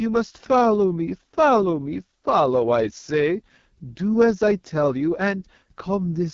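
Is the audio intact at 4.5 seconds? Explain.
No. At 4.5 seconds, as throughout, the speech carries AMR wideband (HD Voice) codec damage. Heavy raspy roughness fits the lowest 6.6 kbit/s rate, where a coarse pulse-excited vocal tract model and noise-filled top band replace detail. A spectrogram shows smeared harmonics and nothing above 7.3 kHz.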